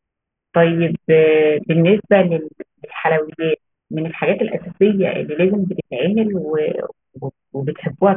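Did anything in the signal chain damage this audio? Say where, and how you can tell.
Yes. Aliasing throughout, from sample-rate conversion: sibilants turn gritty right up to a hard 3 kHz edge, unlike clean band-limiting. This fits an unfiltered drop from 48 kHz to 6 kHz, with folded energy about 20 dB down.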